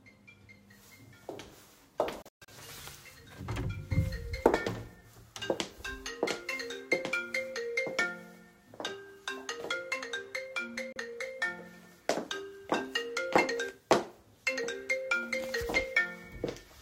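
Digital broadcast dropouts at 2.22 to 2.48 s and at 10.92 s. The receiver muted when frames were lost or corrupted, so the audio snaps off within 3 ms. The first is a broken cluster of holes, the longest 128 ms. The second is a single 32 ms gap, fitting one lost frame.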